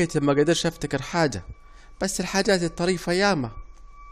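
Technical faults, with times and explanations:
2.34 s overlap between stream segments: 12 ms discarded where two segments' timestamps overlap, causing a tiny skip. The waveform jumps abruptly, and the spectrogram shows a vertical line.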